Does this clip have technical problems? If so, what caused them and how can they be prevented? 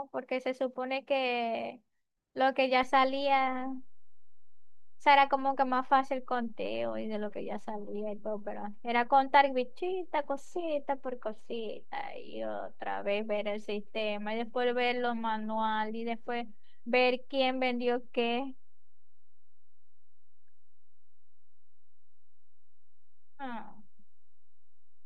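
Yes. A DC step at 2.83 s shifts the waveform's zero line by about -39 dBFS, as happens when a converter recalibrates or an input carrying an offset is switched in. The offset then holds to the end, producing one low thump while the speech carries on unchanged. To prevent it, AC-couple or high-pass filter the input, and avoid recalibrating or switching inputs while recording.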